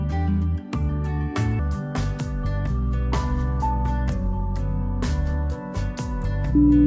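From 1.59 s to the end, the audio is played back at a lower sample rate than it was recorded at, with no rate conversion in between. That is a wrong sample rate fault. The ratio fits material recorded at 24 kHz being clocked out at 16 kHz. Everything runs at 0.667 times normal speed and drops about 7.02 semitones in pitch together, so the sound turns noticeably slower, lower and more drawn out.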